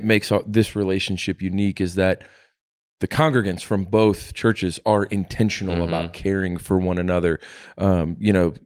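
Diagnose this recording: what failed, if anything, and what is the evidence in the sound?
Nothing failed: the speech signal shows no audible defect at any stage of the chain, from capture through to playback.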